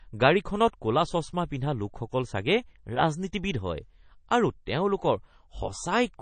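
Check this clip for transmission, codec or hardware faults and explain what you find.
One codec fault runs through the entire speech clip: plainly audible MP3 compression damage. The encoder, likely MP3 at a bitrate that fits about 32 kbps, drops weak frequency lines frame by frame and removes everything above 9 kHz. That leaves the speech watery and swirly, dulled at the top, with smeared attacks.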